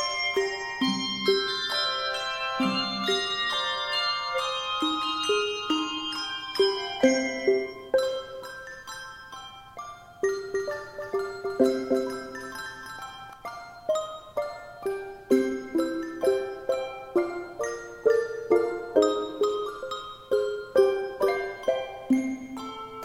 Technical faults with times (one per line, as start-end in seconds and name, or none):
10.49-13.33 doubled audio track